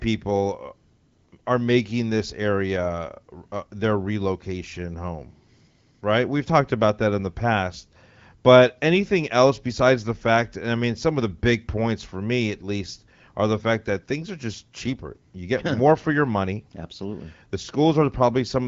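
No technical faults are audible.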